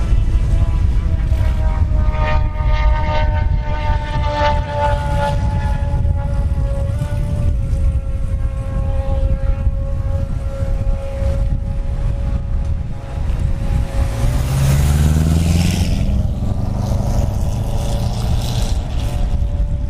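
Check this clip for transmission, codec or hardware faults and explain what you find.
Two brief faults stand out, both a drift correction step, at 6.94–7.54 s and 14.26–15.85 s. Playback runs about 6% fast and sounds about a semitone (102 cents) sharp, then snaps back. This is likely clock-matching software stepping the rate to correct its buffer. A single step, rather than wow's continuous wobble, is what identifies it.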